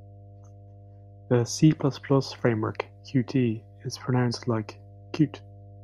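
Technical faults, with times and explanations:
Throughout, mains hum: a steady low tone at 50 Hz sits under the speech, roughly 25 dB below it. Power-line current is leaking into the signal path, most plausibly through a ground loop or stray coupling from a nearby transformer. A spectrogram shows an unbroken horizontal line at 50 Hz with low harmonics above it, and the waveform shows a constant low-frequency ripple during pauses.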